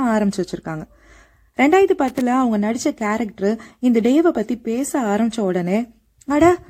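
At 2.08 s the speech is broken by loose connector crackle lasting until 2.21 s, roughly an eighth of a second of irregular scratching. A worn or dirty contact in the signal chain is making and breaking as it shifts, chopping the audio on and off and adding small steps from any DC present. On a waveform this shows as jagged, ragged gaps and spikes; a spectrogram shows scattered broadband vertical streaks across that span.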